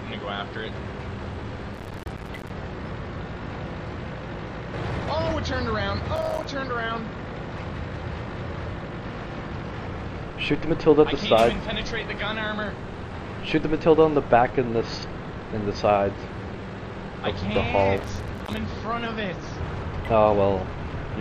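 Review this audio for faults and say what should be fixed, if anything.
Processor overload crackle at 1.74–2.50 s, 6.16–6.45 s and 17.97–18.57 s. Missed deadlines on buffers of roughly 5 ms leave runs of short silent gaps, which show as notched dropouts in the waveform and dense vertical broadband streaks on a spectrogram. Using a larger buffer or reducing the processing load would prevent it.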